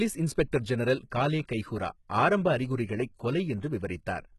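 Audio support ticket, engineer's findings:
Treble rebuilt rather than coded, throughout; likely HE-AAC compression at a very low bitrate, sound fits roughly 16 kbps. Upper band copied up from lower spectrum, harmonics misaligned at crossover. Sibilants gritty, metallic, lispy. Heavy codec damage, nothing above 11.8 kHz.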